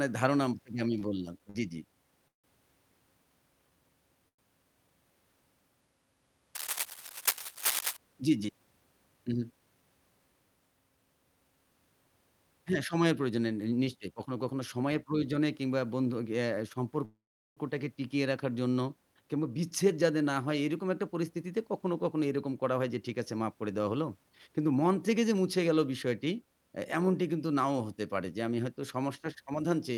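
A speech recording with five kinds of network and hardware fault. Between 0.99 and 2.46 s, repeated stalls (stutter) break the flow four times, adding about 240 ms of held sound, the longest hold 158 ms. Packets arrived too slowly, the jitter buffer kept running dry, and the receiver extended the last sound each time. On a spectrogram these appear as short stretches of frozen, smeared harmonics, the longer ones fading in the waveform. At 4.28 to 4.40 s a short stall from a late packet holds one sound for 100 ms before speech resumes where it left off, visible as a brief flat band of repeated spectrum with a slight dip in level. From 6.55 to 7.97 s a dense, uneven scratching rides over the speech only a few decibels below it, most likely cable scratch noise from a worn lead or connector being moved, seen as irregular broadband vertical streaks. Jitter buffer speed-up makes the talker sound hurried at unchanged pitch: 9.18 to 9.83 s at 113% speed, 13.96 to 15.41 s at 109%, and 19.36 to 25.57 s at 107%, trimming roughly a tenth, about 0.15 and about 0.4 of a second respectively. 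The receiver was cutting out pitch-period-sized slices to drain excess buffered delay, so syllables look compressed in time while harmonic spacing stays the same. At 17.05 to 17.59 s a call audio freeze inserts a 515 ms gap. A fading fill of the last sound gives way to about 390 ms of silence before speech continues intact. The waveform shows a decaying tail and then a flat line, likely from packets held up in transit.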